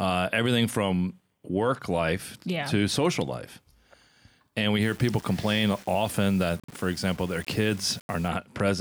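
From 4.83 s to 8.28 s the speech turns grainy. This is low bit depth without dither, likely from rounding to 6 bits. The error tracks the signal, roughly 25 dB below it. On a waveform, quiet passages show visible stair-steps, and a spectrogram shows a signal-dependent noise floor filling the gaps.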